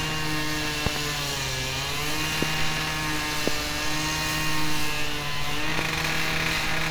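Loud pops land at 0.86 to 0.99 s as a quick double, then singly at 2.43, 3.48 and 5.79 s. They are sharp thumps well above the sound, the one at 3.48 s the strongest. The likely cause is a brief voltage pulse added to the signal.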